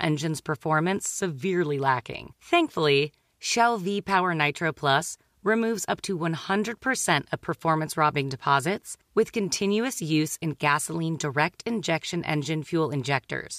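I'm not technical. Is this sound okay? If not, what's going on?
Yes, it's fine; nothing here needs fixing.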